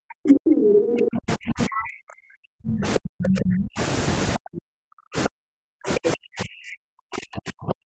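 From the start to 3.79 s the speech is pulled down hard, dipping by roughly 40 dB in places. This is speech suppressed in double talk, likely caused by an echo canceller that could not tell the near talker from loudspeaker echo while both sides spoke, so it attenuated everything. Inside that stretch, the other side's voice leaking through appears from 0.28 to 0.8 s, about 10 dB louder than the talker, and again from 0.96 to 1.17 s at about the same level as the talker. Both are likely residual echo the canceller failed to remove from the microphone signal.

After a clear gap, suppression returns at 4.37 s and runs to the end, with the same deep dips of about 40 dB. Two short bursts of leaked far-end voice cut through it. The first runs from 5.24 to 5.29 s at about 5 dB below the speech, and the second from 6.06 to 6.16 s at roughly equal level. Each is brief, sitting within audio that the call path already limits to 8 kHz.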